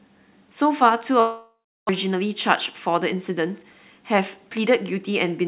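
Speech, band-limited to nothing above 4 kHz, which fits a G.711 A-law call path at 64 kbps. From 1.2 to 1.91 s the sound smears into a fading buzz and then about 330 ms of silence, and roughly 600 ms of speech never returns. That is likely a long network dropout, not a short packet-loss glitch, because the concealment runs out entirely. From 2.87 to 3.64 s the speech runs at about 106% speed with unchanged pitch as the jitter buffer speed-up trims around 50 ms in small pitch-period pieces, unlike a resampling error, which would raise the pitch.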